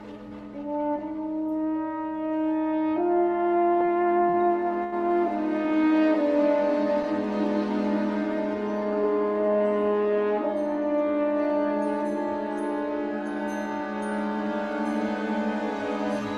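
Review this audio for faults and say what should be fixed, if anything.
Three brief hitches come close together, each holding the current sound a little too long with a faint buzzy smear before the audio resumes. They fall at 3.85 to 3.90 s, 4.30 to 4.36 s and 4.84 to 4.94 s, growing from about 23 ms to 40 ms to 86 ms of held sound. Each is a short stall from a late packet. The jitter buffer ran dry, so the receiver stretched the last audio to cover the gap and then continued from the same point. Nothing is lost, but timing slips by the stretched amount each time. Giving the jitter buffer more depth, or letting it adapt upward when arrival delay starts climbing, would absorb these late packets before they cause audible stalls.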